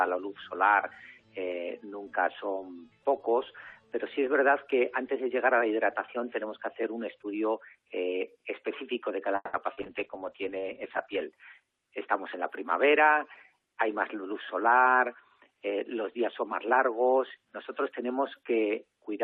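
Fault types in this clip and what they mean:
Call audio freeze: 9.35 to 9.56 s, the sound drags into a fading buzz and brief silence, likely stalled packets draining the jitter buffer.
Short concealed packet loss: 9.73 to 9.80 s, 40 ms never arrived in time, so the receiver extrapolated the preceding sound, leaving a quick smear.
Call bitrate drop: 9.83 to 11.32 s, the encoder falls from 128 to 9 kbps and cuts highs above 8 kHz, sounding rough and muffled.
Jitter buffer speed-up: 13.59 to 14.22 s, the receiver trims short pitch-period slices, around 70 ms total, so sound runs 9% faster at unchanged pitch.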